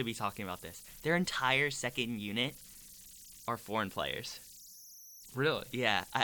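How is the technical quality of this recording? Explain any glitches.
Technical quality suffers from converter idle tones running throughout the speech: a tone around 5 kHz sits in the pauses, with grainy noise under quieter passages, about 21 dB below the signal. An undithered delta-sigma converter settles into repeating bit patterns at low input levels, producing tones.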